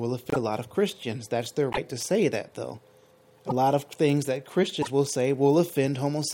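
At 0.30–0.36, 1.72–1.78, 3.47–3.52 and 4.81–4.88 s the audio skips ahead and sputters for two or three 24 ms frames, likely a broken MP3 bit reservoir. Each shows as a brief broadband smear or gap on the spectrogram.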